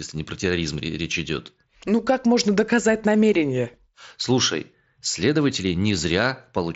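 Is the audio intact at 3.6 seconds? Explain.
Yes, the speech at 3.6 seconds is intact, with no fault at that moment.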